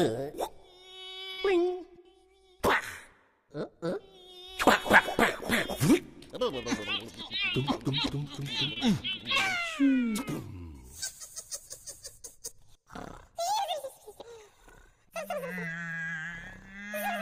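A burst of packet loss hits at 1.31 to 1.40 s: roughly 60 ms of audio never arrived in time, so the receiver stretched the last sound for about 66 ms while fading it, and playback then jumps ahead with that stretch gone. Short concealed packet loss appears at 3.90 to 3.93 s and again at 8.73 to 8.78 s. Each time, 20 ms went missing and the decoder patched it by extending the preceding sound, then blending back in, leaving a brief smear or wobble.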